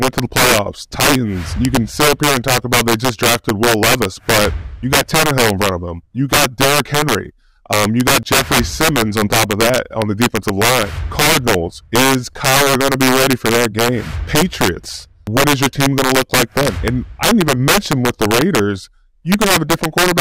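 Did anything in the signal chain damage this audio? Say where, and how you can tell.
Yes: integer overflow at the sample-format conversion stage, across the whole clip. Gain about 8 dB too hot was applied in fixed-point arithmetic without saturation, so a few percent of samples, the loudest peaks, wrapped to the opposite extreme instead of being limited. Each one is heard as a violent crack, harsher than clipping. On the waveform, peaks jump from one rail straight to the other. On a spectrogram, the cracks show as full-band vertical streaks on loud passages.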